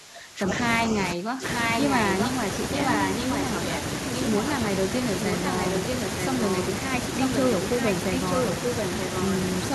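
Speech, with two faults. From 0.0 to 0.5 s and from 1.13 to 1.44 s, the voice dips by up to about 20 dB. This is speech suppressed in double talk. The likely cause is an echo canceller that mistook the talker for loudspeaker echo while both sides spoke. Echo leak appears at 0.48–0.52 s, 1.49–2.29 s, 2.74–3.78 s, 5.25–6.62 s and 7.23–9.24 s. A copy of the voice returns 932 ms late, at about the same level or about 5 dB below. Its likely cause is a far-end loudspeaker whose echo canceller let that echo through.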